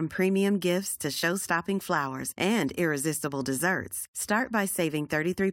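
Listening through this short speech recording, nothing stood out as a technical problem.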